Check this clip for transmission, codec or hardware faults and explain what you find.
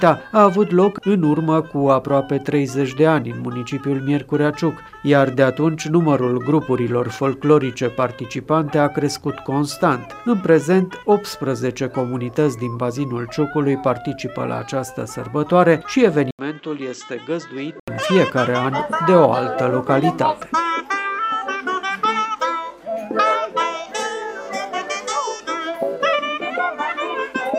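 One hardware-side fault appears, from 16.31 to 17.88 s: the sound abruptly turns duller and quieter, most likely because the input switched to a poorer device. A gap of about 80 ms opens at the switch, then the level falls by around 10 dB and a faint new noise floor appears. The substitute input passes nothing above 7.9 kHz. On a spectrogram, energy above 7.9 kHz is sharply cut off for that stretch; the waveform shows the brief gap and a shrunken envelope.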